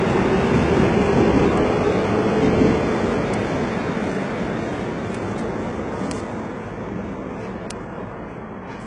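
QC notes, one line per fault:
Throughout, HE-AAC compression: the whole clip has that gritty, metallic top end, and nothing comes through above about 10.9 kHz. The damage is heavy, and it fits a very low bitrate in the region of 12 kbps. The likely cause is the codec keeping only the lower spectrum and faking the treble by copying lower bands upward under a coarse envelope, so the highs sound bright but synthetic and their harmonics don't line up with what's underneath.
1.57, 3.34, 5.15, 6.11 and 7.71 s, bit error spikes: five sharp, isolated ticks that have nothing to do with the surrounding sound. Each one is a flipped bit that makes a sample jump by a power of two and snap straight back. The first three hit a single sample and the last two hit two samples in a row. Because the jump is so short, the energy spreads across the whole spectrum, which is why each one comes out as a clean click rather than anything tonal.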